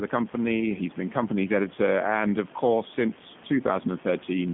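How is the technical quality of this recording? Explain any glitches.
The quality is limited by one fault that runs through the whole clip. The speech has been through a G.729 codec, and the damage is plainly audible.

From start to end, the speech passes through a narrow telephone band of roughly 150 Hz to 3.5 kHz. Nothing is left above 3.6 kHz. The codec does not store the waveform. It rebuilds each 10 ms frame from a vocal tract filter, a pitch predictor and a few pulses. The coarseness points to an 8 kbit/s coder. The voice sounds muffled, slightly rough and synthetic. Sibilants lose their edge.

The room noise sits about 21 dB below the speech.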